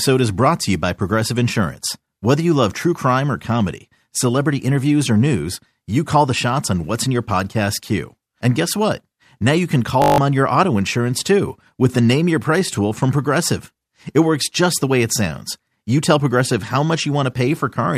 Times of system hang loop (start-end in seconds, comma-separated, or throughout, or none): 10.02-10.18